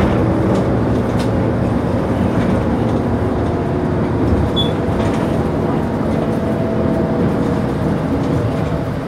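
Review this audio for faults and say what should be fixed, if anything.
Nothing here needs fixing; these sounds come across without any technical faults.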